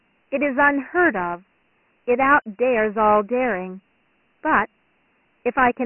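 From start to finish the speech carries Dialogic VOX ADPCM damage, and it is heavy. Each sample is coded as a small 4-bit step from a predicted value, and the coarse steps leave a gritty hiss that rides along with the speech. Nothing survives above 3 kHz, which points to 6,000 samples a second at about 24 kbps. A spectrogram shows a hard ceiling at 3 kHz, little below 200 Hz, and speckled noise filling the band under the speech, while the waveform looks fuzzy.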